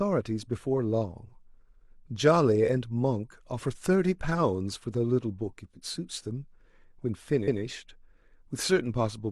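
Repeated frames at 7.43 to 7.57 s interrupt this speech clip: a 139.3 ms block of compressed audio is decoded twice, so that stretch plays back once more as a stutter, which fits a short run of duplicated frames and lengthens the clip by 139.3 ms.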